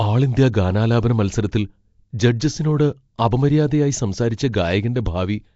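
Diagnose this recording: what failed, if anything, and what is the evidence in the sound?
Nellymoser compression, throughout the speech: a rough, hissy halo and a smeared, underwater quality, with nothing above 7.7 kHz. At the codec stage, likely Nellymoser Asao at a rate that fits about 32 kbps, weak bands receive no bits and are replaced by noise.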